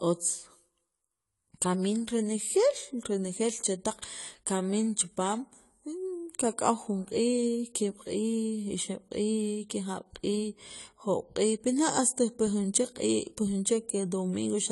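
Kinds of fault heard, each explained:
AAC compression: speech is dull and smeared with a warbling, fizzy edge on sibilants, nothing above 11.5 kHz, likely from low-bitrate AAC-LC around 32 kbps.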